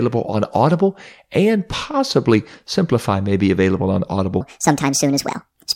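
It's a short speech recording, and it's fine until about 4.41 s. Right after "may be available on", a section at the wrong speed runs to the end. The audio jumps to about 1.53 times normal speed, so pitch and pace rise together, around seven semitones higher, with a squeaky, hurried sound. The likely cause is that last stretch being played or rendered against the wrong clock during an edit or export.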